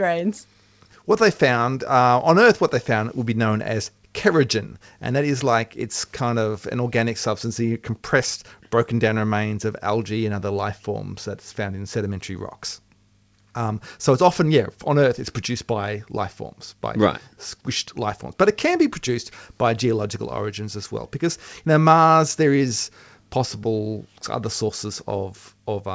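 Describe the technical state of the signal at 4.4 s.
At 4.4 s the speech is intact, with no dropout, glitch or other fault audible at that point.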